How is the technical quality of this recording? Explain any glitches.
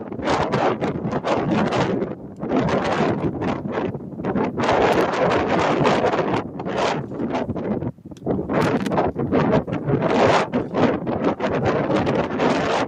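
The recording has clear technical faults: a speech noise suppressor working across the whole clip, repeated moments where it pulls the sound down, and two bursts of connector crackle.

Noise suppressor applied to music or sounds, throughout: a suppressor tuned for speech stays active and treats sustained, steady material as noise to be reduced. Its gain keeps shifting by around 5 dB as it decides what to keep, so onsets pass while held portions and decays are lowered. The result is a pumping, fluttering level and a thinned-out body to the sound.

Sound cut by the noise suppressor, at 0.00–0.23 s, 2.06–2.43 s, 3.94–4.22 s, 6.44–6.64 s, 7.03–7.20 s, 7.50–7.66 s and 7.91–8.24 s: in each of these spans the suppressor judges the sound to be noise and attenuates it harder than elsewhere. The drop reaches about 4 dB, and about 5 dB at 2.06 s and 7.91 s. Each dip lasts from a fraction of a second up to nearly half a second, so tails sag or cut short audibly.

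Loose connector crackle, at 4.92–5.04 s and 8.61–8.87 s: a worn or dirty contact momentarily makes and breaks, chopping the signal on and off in quick irregular succession. This is heard as a short, scratchy burst of crackle, about a tenth of a second the first time and roughly a quarter second the second time.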